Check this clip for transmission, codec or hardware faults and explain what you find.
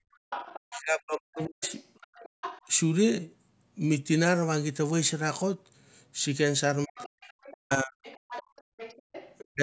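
The speech in this clip shows three echo-canceller faults that cluster around two stretches where the far end is playing.

Background gated by the echo canceller occurs from 0.00 to 0.30 s, 2.29 to 2.41 s and 8.43 to 8.77 s. While the loudspeaker is active, the canceller pulls the microphone down by about 36 to 39 dB, so the room tone abruptly vanishes and then snaps back. Unlike double-talk suppression, these dips empty the background itself rather than cutting into the talker's speech.

The other side's voice leaking through runs from 0.13 to 2.69 s and again from 6.97 to 9.45 s. A second voice sits roughly 15 dB under the talker, and is likely residual loudspeaker echo that the canceller failed to subtract from the microphone. What distinguishes it from crosstalk or a mixing fault is its timing: it appears only while the far end is speaking.

Speech suppressed in double talk affects 0.66 to 1.72 s, 6.86 to 8.06 s and 9.50 to 9.61 s. 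In these spans, the talker's own speech dips by as much as about 40 dB or breaks into fragments. The first two of these spans overlap the leaking far-end voice. That overlap fits a canceller that could not separate near speech from echo and attenuated both. Gating, by contrast, mutes the background, while this fault eats into the talker's speech. The call processing's band stops at 8 kHz.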